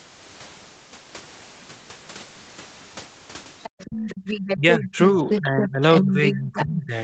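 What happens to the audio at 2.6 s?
Nothing goes wrong at 2.6 s; the speech there is intact, carrying only the normal band limit of the call path, with nothing above about 8 kHz.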